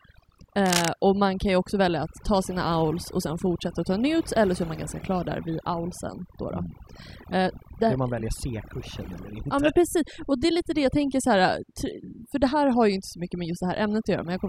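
Across the whole clip the speech sits over a background of near silence flecked with twinkling specks. This is overdone noise removal: a noise reduction setting strong enough to pull individual frequency bands far down whenever they approach the noise estimate, taking quiet parts of the speech with them.

From 0.66 to 0.90 s a burst of dense, uneven scratching lands over the speech, roughly as loud as the speech itself. This is cable scratch noise, likely from a worn cable, connector or control being moved so its contact resistance changed rapidly.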